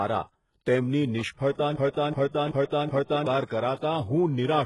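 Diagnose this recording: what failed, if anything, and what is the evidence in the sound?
Codec stage. The speech has nothing above 11.4 kHz and heavy codec damage. The upper band is rebuilt from copied lower bands, likely by HE-AAC compression near 12 kbps.

Playback or stream stage. From 1.76 to 3.27 s a 378 ms fragment repeats four times back to back. A likely stall caused this broken-record loop, losing the audio that should have played.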